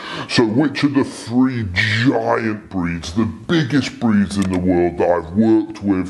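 Throughout, everything runs slow and sounds about five and a half semitones low. This is a wrong sample rate: 44.1 kHz material played back at 32 kHz, at 0.726 speed.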